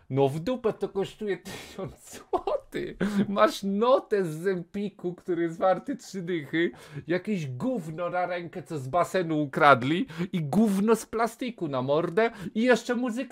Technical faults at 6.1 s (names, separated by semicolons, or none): dropped samples